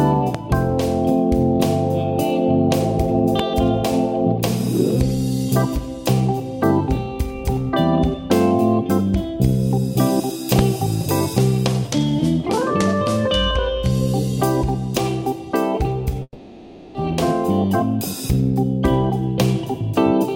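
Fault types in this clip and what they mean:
Loud pop: a sudden voltage step or pulse, likely from a plug, switch, static or driver glitch, added on top of the signal. Three single sharp pops, at 0.35 s, 3.39 s and 10.6 s, each about 22 ms long and roughly 15 dB above the surrounding sound, which continues underneath.
Long network dropout: audio likely stopped arriving over the network for a sustained stretch, so a section was never played. From 16.23 s to 16.97 s, about 720 ms is lost, covered by a fading buzz- or hiss-like continuation ending in roughly 40 ms of silence before the sound resumes further on.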